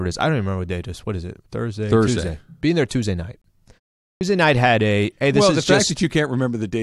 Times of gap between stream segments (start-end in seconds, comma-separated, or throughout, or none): 3.42-3.44